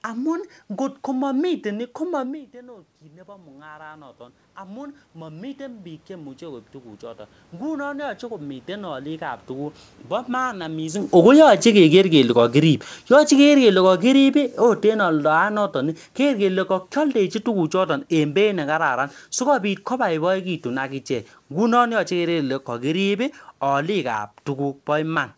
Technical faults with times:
2.24-11.84 automatic gain rising
11.01-20.28 automatic gain falling

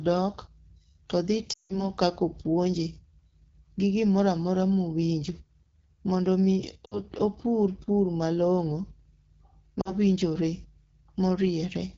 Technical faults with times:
0.00-11.97 AMR wideband (HD Voice) codec
1.53-1.85 lost AMR speech frames
6.86-7.01 lost AMR speech frames
9.81-9.93 lost AMR speech frames

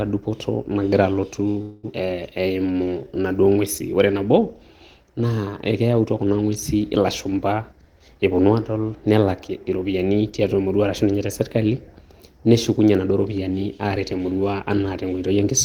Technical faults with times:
1.61-1.85 call audio freeze
1.93-1.96 skip ahead
2.34-3.23 jitter buffer slow-down
7.62-8.41 jitter buffer speed-up
13.85-14.81 jitter buffer speed-up

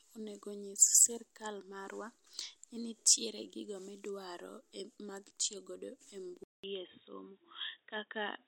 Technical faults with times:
6.44-8.47 input switched to a poorer device

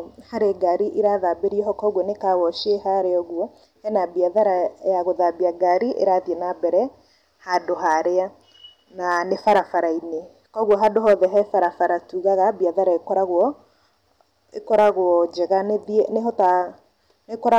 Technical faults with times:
0.00-17.59 hard clipping

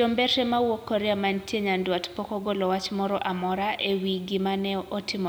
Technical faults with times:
0.00-5.28 low bit depth without dither

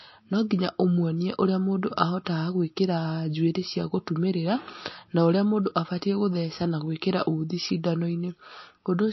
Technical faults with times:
0.00-9.13 MP3 compression

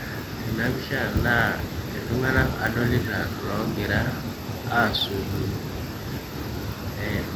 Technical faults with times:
0.00-7.35 block size mismatch (padded)

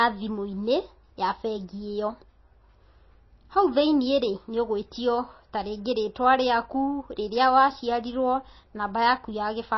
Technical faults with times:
0.00-9.78 MP3 compression

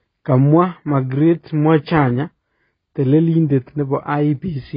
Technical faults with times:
0.00-4.77 AAC compression

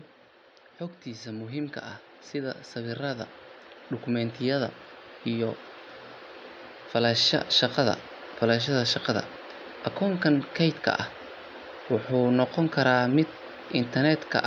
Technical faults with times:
1.03-3.37 automatic gain rising
4.05-5.66 automatic gain rising

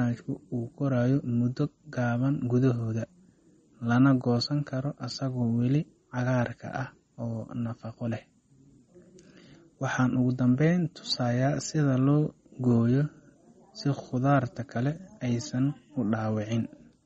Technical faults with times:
0.00-17.06 MP3 compression

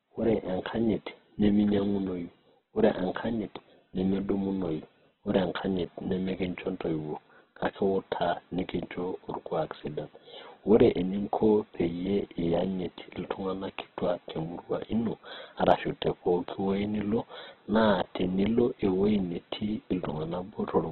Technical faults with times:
0.00-20.92 Opus compression

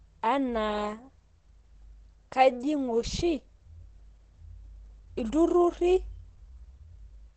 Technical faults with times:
0.00-7.36 Opus compression

